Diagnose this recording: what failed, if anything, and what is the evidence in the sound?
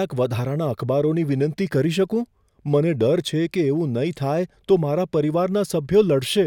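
Nothing in the signal chain has failed: the speech signal is continuous and intact, with no audible sign of trouble at the capture, conversion, transport or playback stages.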